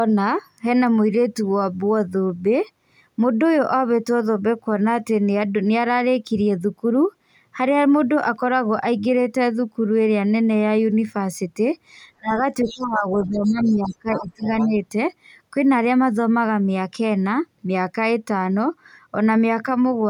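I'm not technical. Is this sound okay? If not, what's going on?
No. Between about 12.2 and 14.8 seconds the talker's voice keeps ducking. It drops sharply from 12.18 to 12.43 s, sags again from 12.64 to 13.06 s, and fades in and out from 13.27 to 14.76 s, so parts come through weak or broken. This is speech suppressed in double talk. Both people were likely talking at once, and the call's echo canceller, unable to tell the local voice from the other person's voice on the loudspeaker, turned everything down.

In the same stretch, a second, fainter voice can be heard underneath: 12.65 to 12.87 s, a longer patch from 13.17 to 13.95 s, and two brief scraps at 14.14 to 14.25 s and 14.60 to 14.68 s. The last two scraps are a little more noticeable. This is the other side's voice leaking through. The talker's device was likely playing the other person aloud, and the echo canceller failed to clear all of it from the microphone.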